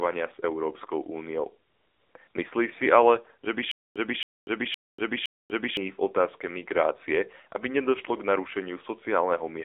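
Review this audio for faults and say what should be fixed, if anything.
The whole clip carries the sound of the AMR narrowband mobile codec. Nothing below 300 Hz or above 3.7 kHz survives, and the speech has a buzzy, synthetic edge. The damage is plainly audible and fits a low rate around 7.4 kbps. The codec rebuilds the voice from a vocal-tract model excited by a few pulses per frame, so detail is resynthesised rather than simply filtered. A plain band-limit would sound dull but natural, not buzzy like this. To prevent it, capture or route the call over a wideband path (AMR-WB or better) instead of narrowband AMR.

AMR comfort noise fills two pauses: 1.70 to 2.14 s (440 ms) and a brief 60 ms patch at 2.28 to 2.34 s. No speech frames arrived there, so the receiver generated smooth synthetic noise from a rough level and spectrum description. The real background is replaced by an even hiss that switches in and out at the boundaries. 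A dropout or noise gate would leave silence, not substituted noise. Disabling discontinuous transmission on the sending side would keep the genuine background.

A stutter with silent gaps runs from 3.71 to 5.77 s. The same fragment of about 273 ms plays four times, each followed by roughly 242 ms of digital silence, a steady 514 ms cycle. The likely cause is a stalled player or stream replaying its last buffered piece at each retry and then running empty. The audio due in that span is lost. Packet-loss concealment would fade or smear its repeats, but here they are exact copies separated by silence. A larger jitter or playback buffer, with stall handling that inserts silence rather than replaying, would prevent this.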